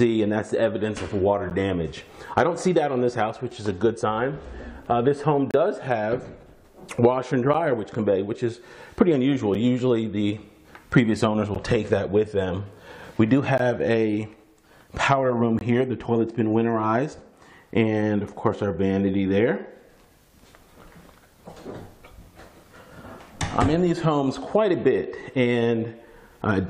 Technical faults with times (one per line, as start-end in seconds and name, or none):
1.50 gap between stream segments
3.51 gap between stream segments
5.51-5.54 gap between stream segments
7.54 gap between stream segments
9.54 gap between stream segments
11.55 gap between stream segments
13.58 gap between stream segments
15.59-15.61 gap between stream segments